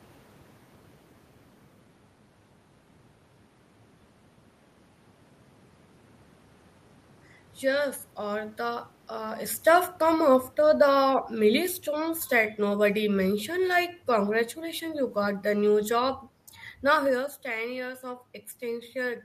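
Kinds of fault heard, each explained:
Automatic gain falling: the gain control eases itself down about 4 dB, so room noise sinks along with the speech, unlike a talker moving away.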